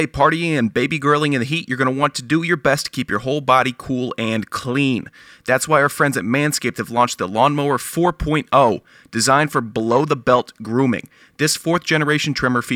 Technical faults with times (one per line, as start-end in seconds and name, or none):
3.79 repeated buffer